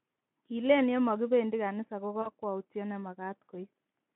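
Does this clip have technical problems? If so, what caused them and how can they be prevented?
Yes. At 2.22 to 2.30 s the speech is briefly stretched and fades, and stays weak for a moment after. This is VoIP packet loss concealed by the speech codec. About 40 ms of audio went missing, which fits two lost 20 ms packets. The Speex decoder filled the gap by repeating its last pitch and filter at falling gain, and since each frame builds on the previous one, recovery lagged. A jitter buffer with forward error correction or redundant packets would prevent it.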